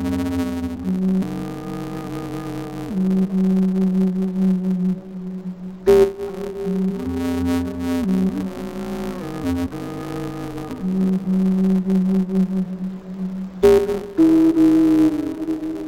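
Throughout the recording, interleaved audio is being read as planar: each short block of alternating left and right samples is split down the middle, with the first half treated as left and the second half as right. Each channel therefore gets half its samples at half speed, while the overall pace holds steady. With blocks only about 5.8 ms long, which fits a 256-sample block, the result is a dull, robotic sound carrying a buzz at 172 Hz and no clear octave drop.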